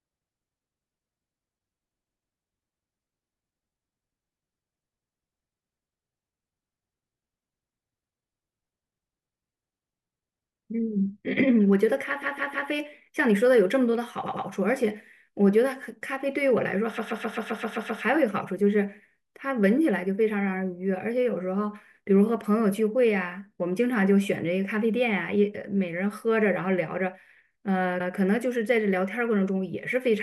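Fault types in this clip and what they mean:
Repeated frames at 1.98, 12.22, 14.25, 16.97 and 27.99 s: a block of coded audio 105 to 157 ms long plays again one to eight extra times, so the speech stutters in place and the clip grows longer, by about 1.04 s at 16.97 s.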